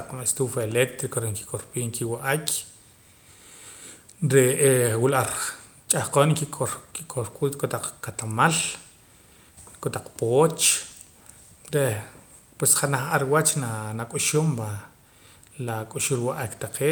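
Speech recording, with nothing technically wrong to report.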